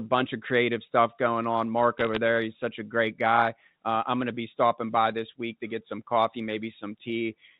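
Bit errors on a digital phone line hit from 1.98 to 2.17 s, right after "creative stuff going on" and just before "there he's such a". The speech passes through G.711 telephone coding, so nothing above 4 kHz comes through. Flipped bits corrupt individual 8-bit samples, and at a rate of roughly 0.4 percent, hits on sign or high-order bits throw single samples far off. That produces a brief burst of sharp ticks and crackle layered over speech that stays otherwise intact.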